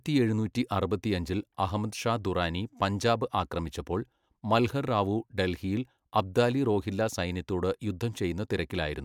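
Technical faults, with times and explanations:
No technical faults are audible anywhere in this speech recording.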